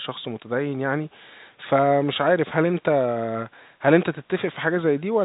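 No technical faults are audible.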